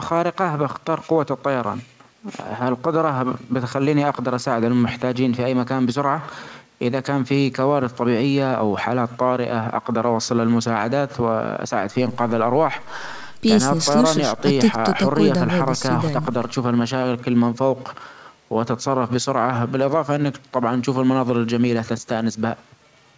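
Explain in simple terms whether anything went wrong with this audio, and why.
Nothing stood out on listening to this speech recording, which sounds like it went through an ordinary call connection whose sound stops at about 8 kHz, as is normal for that kind of line.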